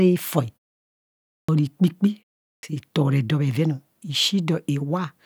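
At 1.40 s and 2.55 s, clipped start after a pause: the sleeping output device wakes late after 0.9 s and 0.4 s silences, swallowing about 85 ms and 81 ms, so onsets begin abruptly with a hard vertical edge in the waveform.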